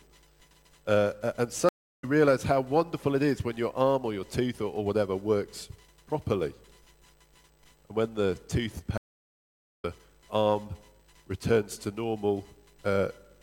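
Two stream reconnects here. At 1.69 s the audio drops out for about a third of a second and picks back up around 2.05 s, but roughly 0.3 s further along than where it left off. The connection broke, the player sat silent, then reconnected and started a fresh decoder mid-stream, skipping what went by meanwhile. At 8.98 s the same thing happens with a longer gap, 0.86 s of silence until 9.85 s, and this time it lands about 0.7 s ahead.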